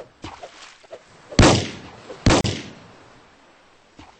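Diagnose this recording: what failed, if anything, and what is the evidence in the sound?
Codec stage, gap at a join of encoded pieces: 33 ms silence from 2.41 s, untrimmed encoder delay and padding; soft-edged blank spectrogram column.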